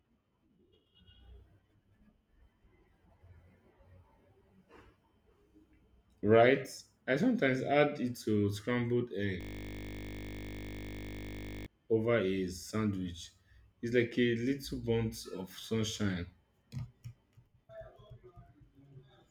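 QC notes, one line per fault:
9.41–11.66 s, system hang loop: speech freezes into a 20 ms segment repeating about 113 times, a steady 50 Hz buzz until "over a sandwich" resumes. Waveform shows identical 20 ms cycles; spectrogram shows flat horizontal lines at 50 Hz harmonics.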